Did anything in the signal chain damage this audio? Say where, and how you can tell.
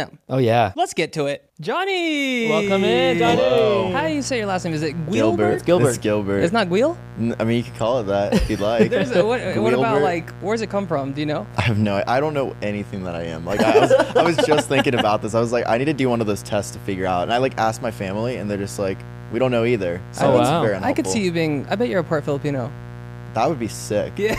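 Yes: mains buzz enters in the analogue wiring at 2.64 s and runs to the end, a raspy 60 Hz harmonic series from switching spikes, roughly 15 dB below the programme.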